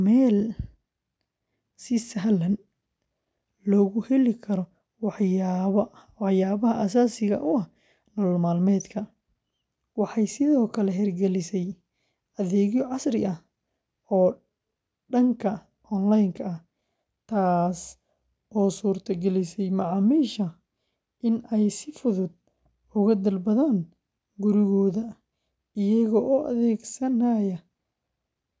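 No technical faults are audible anywhere in this recording.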